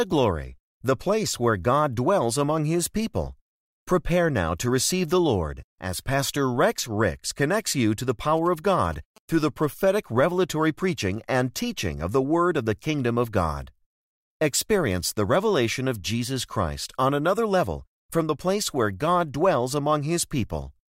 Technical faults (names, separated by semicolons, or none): GSM signalling bursts